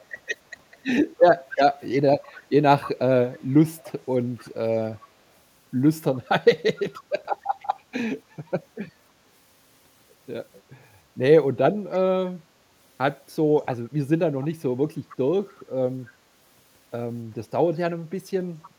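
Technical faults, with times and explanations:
1.18–5.08 s, 6.79–7.67 s, 14.41–14.47 s, 15.09–15.64 s, 18.63–18.70 s: echo leak. The speech returns 294 ms late, roughly 15–25 dB down, likely from incomplete far-end echo cancellation.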